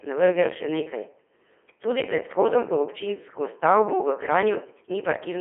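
From start to finish the speech sounds robotic and buzzy, with a synthetic tone confined to a narrow band of roughly 250 Hz to 3.4 kHz. This is heavy Codec 2 vocoder damage. The waveform itself was never carried. Only pitch, voicing, energy and a coarse spectral envelope were sent, at a rate that points to the 2.4 kbit/s mode, and the decoder rebuilt the voice from sine waves, flattening its natural texture.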